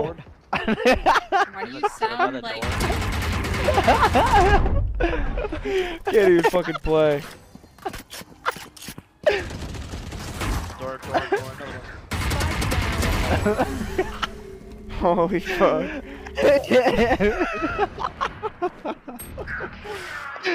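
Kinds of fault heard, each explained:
One channel drops out: at 2.06 s the sound falls abruptly by about 6 dB, holds there for 50 ms, and snaps back at 2.11 s. The likely cause is one side of a stereo feed vanishing briefly before the mono sum, which halves the shared material and removes anything carried only on that side. Unlike a full dropout it never reaches silence, and unlike a gain dip it has hard edges and a fixed 6 dB step with no gradual ramp.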